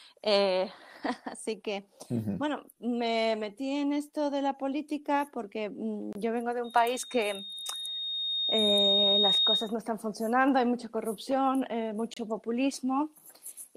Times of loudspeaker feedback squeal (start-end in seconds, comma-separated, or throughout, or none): 6.64-9.74